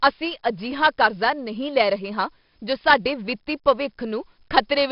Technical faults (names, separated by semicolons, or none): 4-bit ADPCM compression